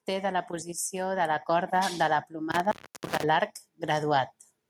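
From 0.05 to 1.78 s the voice and the background noise swell together, climbing by about 6 dB over that stretch. This is automatic gain rising: the gain control judged the input too quiet and turned its gain up gradually, lifting everything at once.

Between 2.52 and 3.24 s the speech cuts out with a crackle at each edge, leaving only faint hiss for about 326 ms before it returns. That is an intermittent contact, a loose cable or plug briefly opening the line and breaking the signal path.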